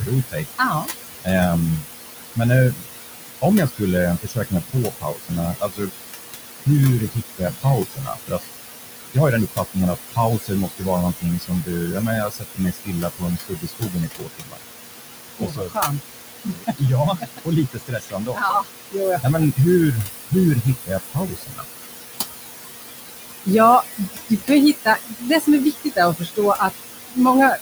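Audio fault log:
Throughout: noise suppressor artifacts. The suppressor pulls the room noise down by about 18 dB, deciding band by band and frame by frame which parts are steady noise. The room noise sits only about 7 dB below the speech, so the floor visibly dips in the gaps and rises back under each phrase. This differs from clipped speech because the fault lives in the leftover background, not in the talker's sounds.
0.0–2.86 s, 3.42–5.92 s, 6.66–8.4 s, 9.02–14.64 s, 15.3–21.65 s, 23.45–27.58 s: speech cut by the noise suppressor. Inside each span the suppressor misreads quiet parts of the speech as noise and turns them down with the background, by about 20 to 22 dB at the deepest. Soft consonants and word endings come out swallowed or faint, adding up to between under a second and about a second and a half in the shorter spans and roughly three to four seconds in the two longest. Unlike the background artifacts, here the speech itself loses pieces.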